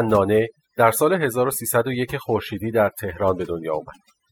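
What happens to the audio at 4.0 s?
At 4.0 s the speech is still affected by overdone noise removal, which runs through the whole clip rather than starting there. A noise reduction stage set too aggressively pushes individual frequency bands down or out whenever they sit near its noise estimate, taking quiet parts of the voice along. The background collapses to near silence sprinkled with twinkling specks. A spectrogram shows scattered isolated dots across an otherwise empty floor.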